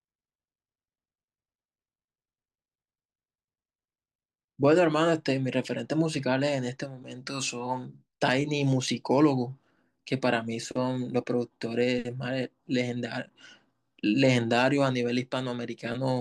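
A short stretch of speech with nothing technically wrong to point to anywhere in it.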